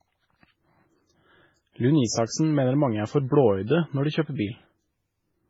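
Speech, with transcoding between lossy codecs running through the whole clip. Two layers of coding damage sit on top of each other: a coarse, smeared first pass whose degradation fits a very low-rate MP3 around 16 kbit/s, then a second codec's own artefacts, consistent with HE-AAC near 48 kbit/s, spending bits re-encoding the earlier damage. That chain is the likely cause. Nothing is present above about 20.3 kHz.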